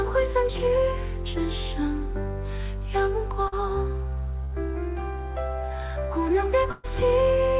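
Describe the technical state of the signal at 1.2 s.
At 1.2 s the signal is intact, with no dropout, glitch or distortion, only the ordinary narrowband character of a telephone-style call path that leaves nothing above about 4 kHz.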